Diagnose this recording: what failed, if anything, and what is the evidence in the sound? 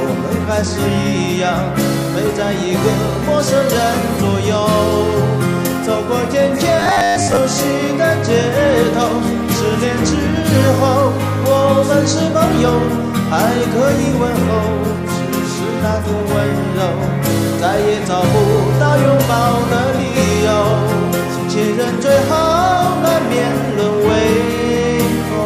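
From 6.80 to 7.37 s, robotic sound from repeated short buffers: a rigid 100 Hz buzz, likely a driver buffer underrun looping 10 ms blocks.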